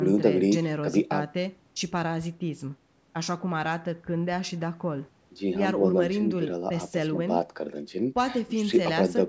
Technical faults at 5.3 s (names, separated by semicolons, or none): none